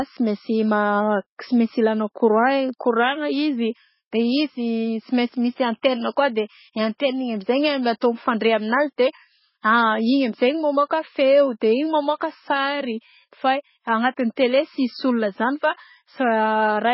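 Throughout, the speech shows heavy MP3 compression, likely from a very low bitrate around 16 kbps. It sounds watery and swirly, and a spectrogram shows flickering patches with nothing above 5.6 kHz. Pre-echo occurs at 5.82 s and 8.01 s, where quantisation noise spreads 17 ms and 11 ms ahead of attacks. It is heard as brief hiss and seen as a smear before each waveform onset.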